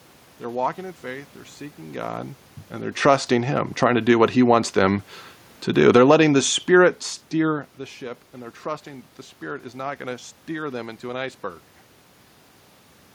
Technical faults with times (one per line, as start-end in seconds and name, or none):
5.75-6.14 automatic gain falling